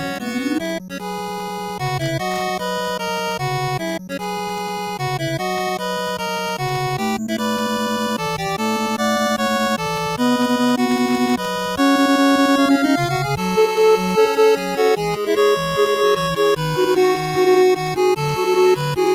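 A noise suppressor meant for speech stays engaged across the whole clip. It treats sustained tones, ambience and decays as noise, so the level swings by around 10 dB while onsets mostly pass. This sets it apart from compressor pumping, which follows loudness rather than steadiness.

The suppressor cuts sound hardest from 0.78 to 1.82 s and from 3.99 to 5.01 s, each time pulling it down by about 12 dB for roughly a second. The held parts and tails sink while the attacks survive, so these spots thin out rather than vanish as a dropout would.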